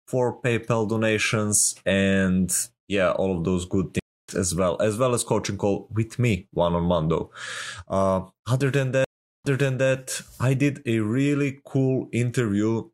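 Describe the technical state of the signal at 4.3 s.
At 4.3 s the signal is inside a stream reconnect, which runs from 3.99 to 4.34 s. After "all of those good" the connection drops and the player goes silent for 290 ms. It then reconnects and starts a fresh decoder partway through the stream. The audio picks up about a fifth of a second later than where it broke off, so that stretch is simply missing. The first decoded frame fades in before "as well as well".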